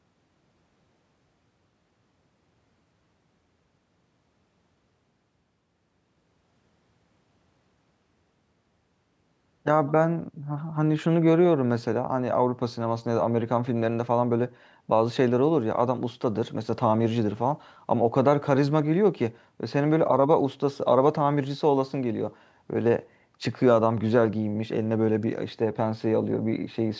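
Nothing in this speech recording stood out as a technical fault on listening, with the call microphone processing trimming the lowest bass and leaving nothing above 8 kHz as expected.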